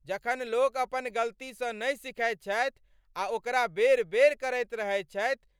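Nothing in the speech recording points to a technical fault: the signal stays continuous and steady throughout, with no audible break, distortion or change in level or timing.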